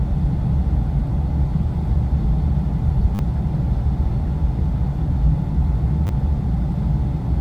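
At 3.15 s a repeated buffer is heard: new audio arrived late, so the device replayed its last 10 ms slice four extra times, with a hard join at each repeat. At this size the repeats merge into a brief 100 Hz buzz rather than a clear stutter. At 6.07 s the same slice-replay happens with two extra plays. Unlike a dropout, these gaps are filled with repeated sound rather than silence, though roughly 40 ms and 20 ms of the original audio are lost.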